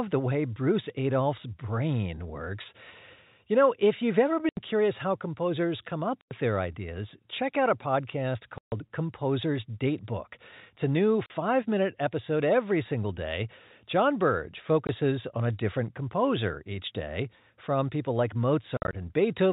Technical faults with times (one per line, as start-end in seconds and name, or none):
4.49-4.57 packet loss filled with silence
6.21-6.31 packet loss filled with silence
8.58-8.72 packet loss filled with silence
11.26-11.30 packet loss filled with silence
14.87-14.89 packet loss filled with silence
18.77-18.93 packet loss filled with silence